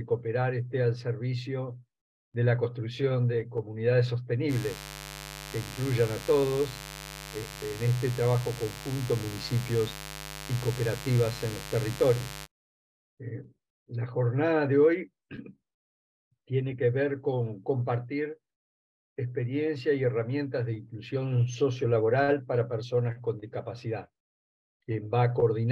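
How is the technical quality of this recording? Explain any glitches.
The recording has mains buzz from 4.48 s to 12.48 s. Switching spikes leaking in twice per 50 Hz cycle put a dense stack of 50 Hz harmonics into the kilohertz range, heard as a steady, raspy buzz roughly 15 dB below the sound.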